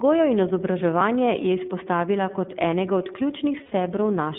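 From the start, the speech runs through the iLBC codec. The band is confined to roughly 150 Hz to 3.6 kHz. Each frame's excitation is coded on its own, and the damage is plainly audible as a rough, synthetic edge. The sound fits 30 ms frames at about 13.3 kbps.

At 3.63 s, right after "kot enega od", there are lost iLBC frames until 3.72 s. The decoder fills the 90 ms gap by repeating the last pitch cycle with added noise. This gives a brief held, buzzy vowel, which fits three missing frames.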